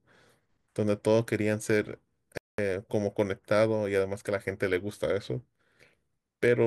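At 2.38 s the speech cuts out abruptly and the output stays silent until 2.58 s, a gap of about 209 ms, before the audio comes back. This is a playback stall. The likely cause is that the player's buffer ran dry or its output thread was held up, so no samples reached the output for that interval. It is heard as a sudden hole in mid-flow rather than a fade.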